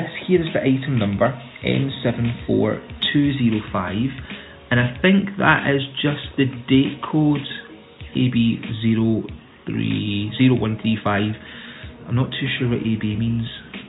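No technical faults are audible anywhere in the recording.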